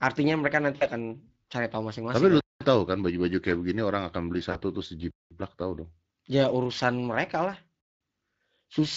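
Speex codec damage is plainly audible across the whole recording. The CELP coder has too few bits to model the excitation, so the speech sounds noisy and hoarse, at roughly 20 kbps.

From 0.75 to 0.86 s, VoIP packet loss concealed by the speech codec stretches the last pitch and filter into a fading sound. The 60 ms of missing audio points to three lost frames, and the voice stays weak briefly afterward.

At 2.41 to 2.61 s, a gap between chunks drops in 200 ms of silence. Nothing is lost, but the flow breaks at a join in audio delivered in 2.5 s chunks.

From 4.51 to 4.59 s, a second concealed packet loss covers 40 ms, likely two frames, with the same brief fading smear and weakened recovery.

The chunk gap repeats at 5.11 to 5.31 s and 7.81 to 8.01 s. Each is again a 200 ms hole, spaced 2.7 s apart: a 2.5 s chunk plus the gap.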